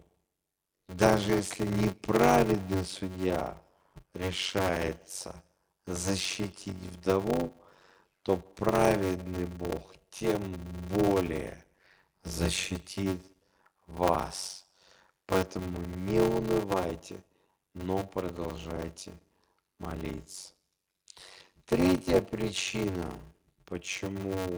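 From start to finish the speech carries a steady buzz at about 93.8 Hz, classic block size mismatch (padded). One stage is handing over shorter blocks than the next reads, which fits a 512-sample read size, with zeros filling each gap. So the speech drags at 0.625x speed while keeping roughly its normal pitch.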